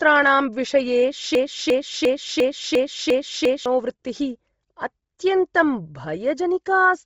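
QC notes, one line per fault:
Throughout, Bluetooth LC3 compression: heavy grainy, breathy texture, nothing above 7.7 kHz, likely a low-bitrate LC3 link; the highs are noise-filled and rough, not merely dull as with a plain low-pass filter.
1.35 to 3.66 s, broken-record loop: one 0.35 s fragment repeats identically seven times back to back, likely a stalled stream resending its last fragment, so the audio meant for that span is lost.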